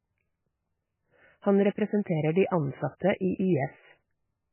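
From start to finish the speech sounds watery and swirly, with nothing above 3 kHz, so it's dull and muffled. That's likely heavy MP3 compression: starved of bits, the encoder chopped the treble and let weak frequency lines flicker between frames, which fits a bitrate around 10 kbps.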